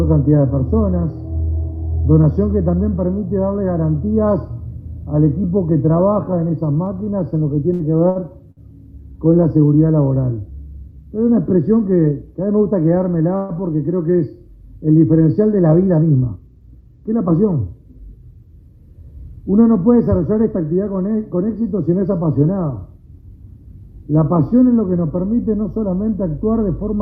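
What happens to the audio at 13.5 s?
A call audio freeze runs from 13.36 to 13.52 s. The likely cause is packets held up in transit, so the receiver's jitter buffer ran dry and it stretched the last sound into a brief fading buzz or hiss for about 133 ms rather than dropping to silence. When the delayed audio arrived, playback resumed exactly where it had stopped. Nothing is lost, but everything afterwards now plays about 133 ms later than before.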